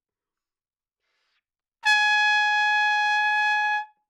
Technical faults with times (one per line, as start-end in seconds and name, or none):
none